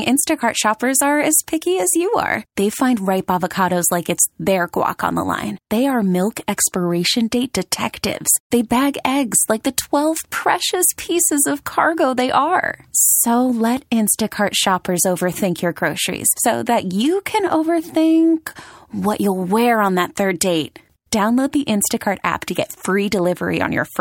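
Listening through the speech, nothing stood out as a technical fault at any point.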